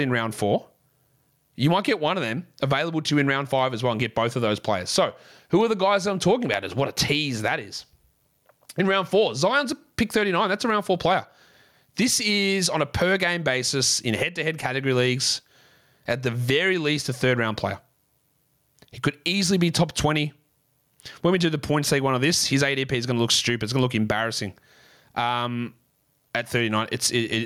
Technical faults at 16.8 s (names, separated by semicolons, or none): gain pumping